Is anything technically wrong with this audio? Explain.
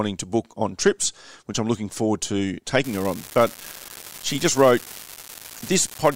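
Yes. From 2.83 s, right after "I'm looking forward to", to the end at 6.16 s, an unreliable data bit flips randomly, adding equal spikes of about −16 dBFS. This produces a steady fizz that persists through pauses, unlike level-dependent clipping distortion.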